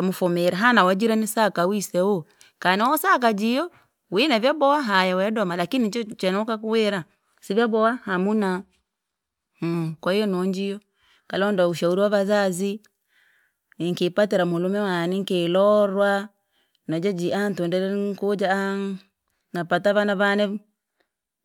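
No technical faults can be heard anywhere in the speech.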